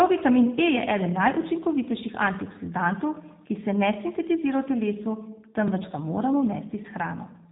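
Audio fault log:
Throughout, G.729 codec: speech sounds plainly rough and synthetic, rebuilt from filter, pitch and sparse pulses at 8 kbit/s, with nothing above 4 kHz.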